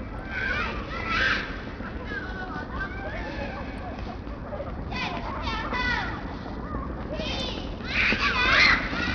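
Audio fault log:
throughout, Bluetooth SBC compression: nothing above 11 kHz, with heavy gritty noise and aliasing, likely from a starved SBC bit pool fitting a 64 kbps stream.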